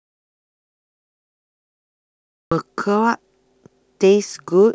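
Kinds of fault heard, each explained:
Audio dropout to silence: the clip opens already silent and the speech only cuts in abruptly at 2.52 s. That gap is silent with no room tone, a flat waveform line and a blank spectrogram, likely from an input lost while recording continued.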